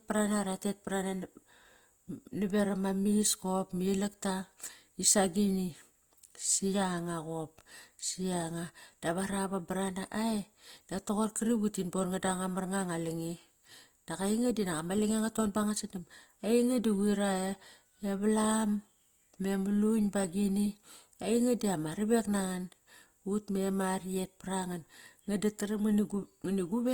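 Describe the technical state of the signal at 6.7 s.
At 6.7 s the speech carries Opus compression damage, present throughout the clip. The coder likely kept each band's energy but filled starved bands with folded or noise content. Tones sound rough and grainy, which fits about 24 kbps. Content reaches about 20.1 kHz.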